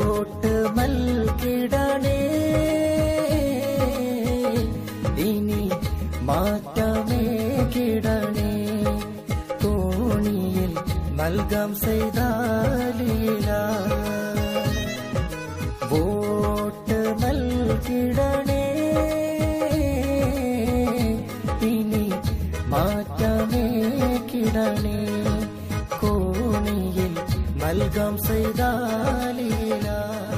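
No technical faults are audible.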